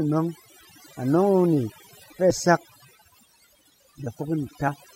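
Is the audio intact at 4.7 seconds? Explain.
No. At 4.67 s the sound jumps ahead, dropping about 70 ms, a few compressed frames (the step fits 24 ms frames).

The moment also carries overdone noise removal, which runs through the whole clip. Bands near the noise estimate get pushed almost to nothing, taking the quieter parts of the speech with them, so the background drops and breaks up into twinkly, warbling specks.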